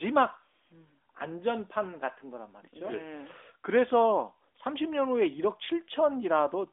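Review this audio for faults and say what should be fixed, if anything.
No faults, nothing to fix: the speech runs over the AMR narrowband mobile codec, consistent with its 12.2 kbps mode, within a 300 Hz to 3.6 kHz line band and with nothing above 3.7 kHz, as expected for that path.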